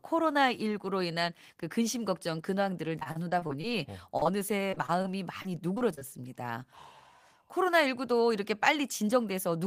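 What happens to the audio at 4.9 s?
That moment sits inside a patch of repeated packet loss (robotic sound), running from about 4.70 to 5.06 s. Over that stretch the speech drops out four times in quick succession, with the longest hole around 22 ms, and each gap gets papered over by stretching the last bit of sound forward. Roughly a fifth of the span is filled that way, so it comes across as choppy.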